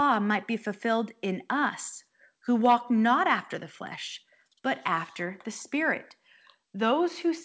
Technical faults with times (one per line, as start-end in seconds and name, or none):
none